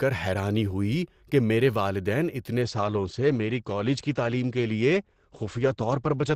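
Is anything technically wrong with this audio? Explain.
Yes. Right after "ہوئی کہ میرے والدین", at 2.62 s, the speech jumps without a gap to an adaptive stream at a lower bitrate, staying there to the end. Nothing survives above 8.4 kHz and artefacts thicken, which points to Opus falling from 64 to 16 kbit/s as the connection slowed.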